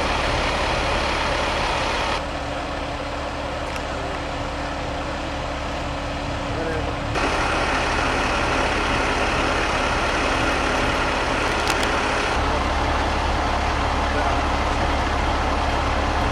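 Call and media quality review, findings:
Scratchy, rustling noise burst over the sound, 11.41 to 11.84 s, roughly 10 dB below signal. Cable scratch noise, likely a worn cable or connector moved, its contact resistance fluctuating.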